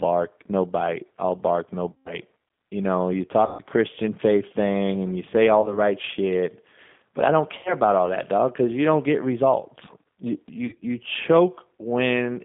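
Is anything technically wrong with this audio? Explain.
Yes. The speech sounds narrow, slightly rough and synthetic throughout, with nothing below about 200 Hz or above about 3.5 kHz. This is the G.729 codec, which fits the 8 kbit/s low-rate version. Instead of storing the waveform, it rebuilds each 10 ms frame from a vocal-tract filter, a pitch predictor and a few pulses. That sparse reconstruction causes the roughness, and the telephone line band removes the lows and highs.

There are also five short dropouts where the speech smears into a buzzy or noisy tone, fades, and then recovers weakly. They come at 1.93–2.18 s after "bite all bark no", 3.46–3.62 s after "know you", 5.61–5.79 s between "and you say all" and "shit but I don't", 7.58–7.74 s, and 10.66–10.85 s. This is VoIP packet loss concealed by the speech codec. When packets went missing, the decoder kept extending its last pitch and filter at falling gain. 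Because each frame depends on the previous one, the speech stays thin briefly after packets return. The first two gaps suggest roughly 130 ms lost each. The last sounds broken up across about 160 ms rather than being one solid gap.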